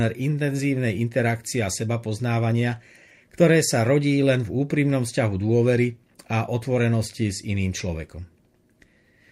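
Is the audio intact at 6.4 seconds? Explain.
Yes, the audio is intact at 6.4 seconds, with no fault to be heard at that moment.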